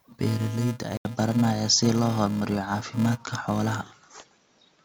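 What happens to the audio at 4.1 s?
At 4.1 s the sound is still in the dull, boxier stretch that began at 0.97 s after an 80 ms gap. The likely cause is an input switched to a poorer device. The band narrows, the level shifts by about 5 dB, and a new noise floor sits roughly 45 dB down, unlike a filter that leaves level and noise untouched.

Under it runs a steady 375 Hz buzz from a filter restarted on every block, which fits 128-sample blocks. Each block starts with a tick that scales with loudness, unlike a hum, which stays fixed.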